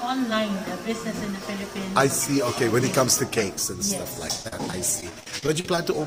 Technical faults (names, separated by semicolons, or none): repeated packet loss (robotic sound)